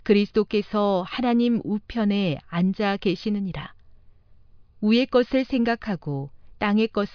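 No technical faults can be heard anywhere in the recording; the signal stays continuous and intact throughout.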